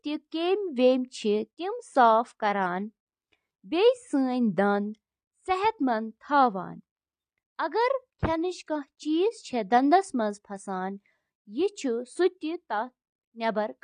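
AAC compression throughout the speech: audibly dull, smeared sound with warbling, fizzy sibilants, likely from AAC-LC quantisation at a low bitrate that fits about 32 kbps.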